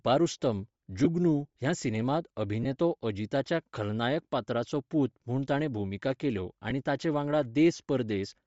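A breathy, grainy edge runs through the speech from start to finish, with thinned upper frequencies. This is likely Bluetooth LC3 compression at a low bitrate, with the high band zeroed and refilled with noise.

Lost LE Audio frames cause brief noisy smears at 1.05–1.07 s before "ह्या सिनेमांत", at 2.63–2.66 s between "ह्या सिनेमांत" and "अजीताच्या खलनायक", at 4.70 s, and at 6.70 s between "म्हूण ताणें भुमिका केल्यो" and "ताचे वांगडा". In each gap the decoder repeated the last spectrum with scrambled phase.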